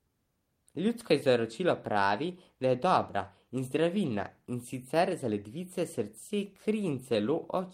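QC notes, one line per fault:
throughout: clock drift between sender and receiver. The far end's clock runs slow, by roughly one and a half percent, so audio arrives a little slower than this end plays it out. The jitter buffer keeps draining, and the receiver has to stretch things to keep from running dry. That steady mismatch is what drives the small timing wobble you hear across the whole clip, rather than any one isolated glitch.
0.08–7.58 s: repeated timing corrections. To cover that shortfall, the receiver keeps repeating short slices of audio, always in the same direction but at uneven intervals. Altogether it pads out about 150 ms over the stretch, so playback runs at about 98% speed. Each repeat is tiny, heard if at all as faint hiccups or a slightly unsteady, dragging tempo in the speech rather than obvious stutters.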